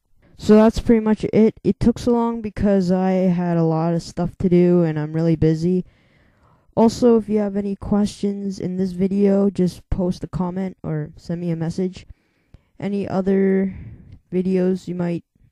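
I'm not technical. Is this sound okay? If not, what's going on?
Yes, it sounds fine; nothing here needs fixing.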